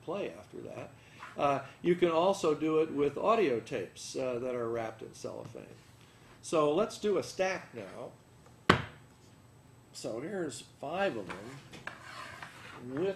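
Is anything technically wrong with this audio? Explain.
Yes. The audio skips forward abruptly at 1.23 s, 8.70 s, 9.68 s and 10.69 s, most likely from a dropped buffer (overrun). Samples weren't collected before the hardware overwrote them, so a short stretch vanished and the surrounding audio was butted together with no gap. Roughly 30 ms is lost at the first point and about 10 ms at each of the others. On a waveform each appears as a sudden splice where the shape doesn't continue. A spectrogram shows a vertical seam where the patterns jump out of step.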